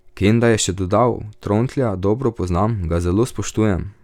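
Nothing in the recording stood out as a problem on listening.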